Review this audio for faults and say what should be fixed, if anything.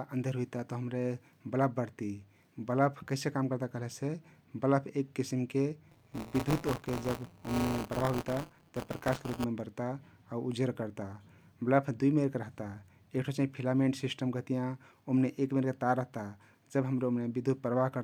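From 5.90 to 9.44 s the speech takes on a robotic buzz at 172 Hz, which is buffer tearing: writer and reader of the ring buffer cross each period, splicing a small slice of audio from a lap earlier, which fits a 256-sample buffer. Resynchronise write and read pointers so they never overlap.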